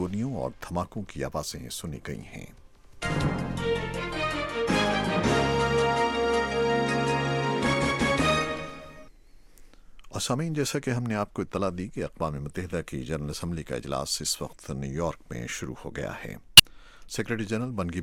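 At 16.57 to 16.60 s a corrupt frame is decoded: flipped bits in one compressed frame misplace spectral energy, producing a brief glitch.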